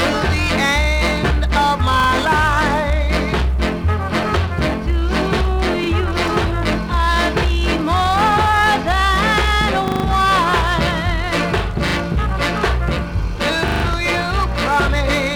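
Repeated buffer stutters occur at 2.0 s, 5.84 s, 9.88 s, 11.88 s and 13.68 s. Each time, fresh audio failed to arrive in time, so the same short slice played again with a hard join at every repeat. The repeated piece fits a 40 ms buffer. It plays two extra times at 2.0 s and 11.88 s and one extra time at 5.84 s. At 9.88 s and 13.68 s it plays four extra times and becomes a brief stutter lasting 0.16 s. The sound then carries on with nothing skipped.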